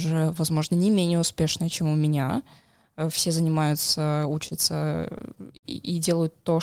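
Speech with repeated stalls (stutter) between 4.31 and 5.66 s: packets arrived late, so the jitter buffer kept running dry, and seven short gaps, the longest 57 ms, were filled by extending the preceding sound. On a spectrogram these appear as brief frozen, smeared bands, and the waveform shows small stretched repeats.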